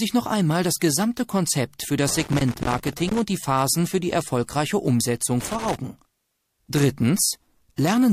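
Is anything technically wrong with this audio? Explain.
Yes, two kinds of fault are audible.

Pre-echo occurs at 0.79 to 0.81 s and 4.46 to 4.49 s: a brief hiss, about 17 dB and about 13 dB above the floor, spreads 23 ms and 21 ms ahead of sharp attacks, softening them. The codec's roughly 36 ms transform block evidently never switched to short blocks, so noise sized for each attack leaked backward.

Loose connector crackle runs from 2.09 to 3.19 s and again from 5.40 to 5.76 s as irregular bursts of scratching. A worn or dirty contact is intermittently breaking the signal path, chopping the audio.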